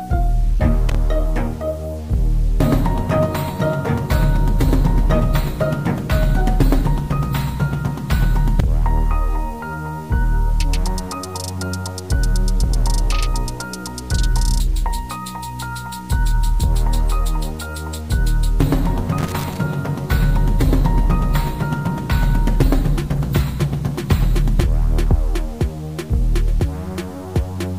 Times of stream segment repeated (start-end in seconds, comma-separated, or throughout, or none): none